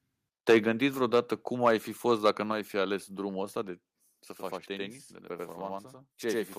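At 0.49 s a burst of microphone overload sets in and lasts until 0.57 s. The loudest peaks are pushed about 7 dB past the converter's limit, and a sizeable share of the samples are flattened, which gives a harsh, crackling edge. The likely cause is an input volume set too high for the converter.

At 0.51 s, in the middle of that distorted burst, the microphone volume is stepped down by about 3 dB. Voice and background drop together at once. This is likely the call software reacting to the clipping.

A second, milder overload runs from 1.65 to 1.71 s, about 4 dB over, with only a few tops cut off. The crackle is brief, and the likely reason is again excessive input gain.

At 2.52 s the level steps down abruptly a second time, by about 4 dB. This is likely another automatic gain cut.

From 4.31 s to the end, channel delay doubling sets in. One channel arrives 93 ms late, which fits a 4096-sample buffer, and when the two are summed to mono the late copy is heard as a distinct slap echo at equal level.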